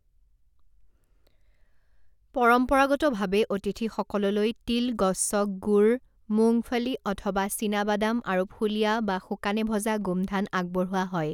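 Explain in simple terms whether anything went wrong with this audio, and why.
Nothing went wrong here: the recording runs along steadily with no dropouts, glitches or odd sounds anywhere in it.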